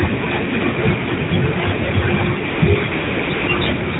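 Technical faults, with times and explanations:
1.30–1.32, 2.50–2.62, 2.92–3.30, 3.34–3.48 and 4.00 s, AMR comfort noise: in these pauses the phone stopped sending speech frames and the receiver substituted synthetic noise, so the background turns steady and smooth. A spectrogram shows flat, featureless noise blocks with abrupt edges; the waveform shows even low-level hiss.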